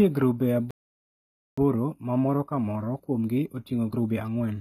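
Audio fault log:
throughout, HE-AAC compression: The treble is present but sounds synthetic, with gritty, lispy sibilants and plainly audible coding damage. This is likely low-bitrate HE-AAC, rebuilding the upper band from copied lower bands, which fits roughly 20 kbps.
0.71–1.58 s, playback stall: The speech stops dead in mid-flow and stays silent for about 0.87 s, then carries on. The player likely ran out of data or its output thread was blocked, so nothing was sent to the output until it recovered.
1.58–4.58 s, time-compressed catch-up: After the gap the speech runs hurried at about 1.25 times normal speed, keeping its normal pitch. The player is working off its backlog by cutting out small pieces and cross-fading across the joins.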